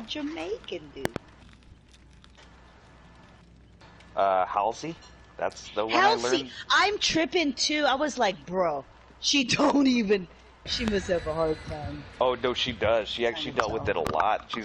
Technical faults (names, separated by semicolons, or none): loud pop